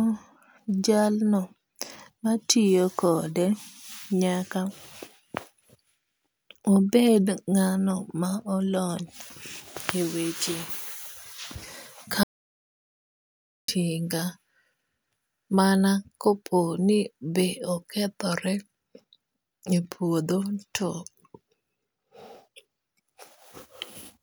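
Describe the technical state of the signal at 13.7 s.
At 13.7 s the speech is just returning from an audio dropout to silence. The gap runs from 12.23 s to 13.68 s, about 1.45 s long. The cut-off is abrupt, and the gap holds silence with no room tone at all. The likely cause is a lost input, while the recorder kept writing silence. The speech then resumes mid-flow, and whatever was said during the gap is gone.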